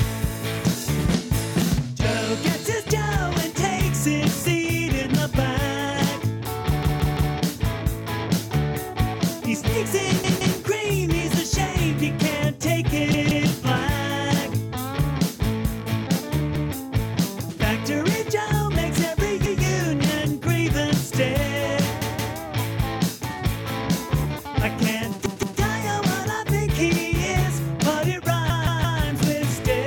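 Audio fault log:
6.83–7.34, 10.24–10.58, 13.14–13.48, 16.56–16.73, 19.46–19.63, 22.02–22.36, 25.26–25.60, 28.50–29.01 s: repeated buffer. A stuttering loop of a roughly 171 ms chunk, replayed one to three extra times with hard joins. The late-arriving audio fits an 8192-sample buffer.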